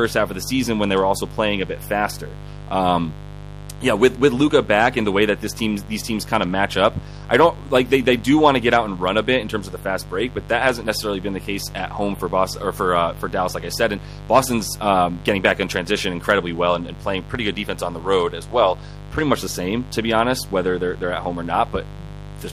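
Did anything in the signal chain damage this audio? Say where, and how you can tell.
Yes. The damage happened in the analogue wiring, before conversion. A steady, raspy mains buzz runs under the speech for the whole clip, sitting only about 15 dB below it. The rasp comes from a 50 Hz fundamental with a dense stack of harmonics reaching into the kilohertz range. That points to sharp switching spikes from a dimmer, rectifier or unshielded cable coupling into the line twice per mains cycle.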